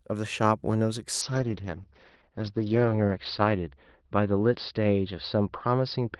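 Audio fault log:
1.25–6.19 s, call bitrate drop: At 1.25 s the sound turns rough and watery and stays that way to the end of the clip. The top end also falls away, with the cut-off dropping from 12 kHz to 6 kHz, so things get muffled. The bandwidth estimate fell and the encoder was told to squeeze into far fewer bits, which fits a step down from about 32 kbps to about 8 kbps. It sits at its worst for 1.85 s and never fully recovers.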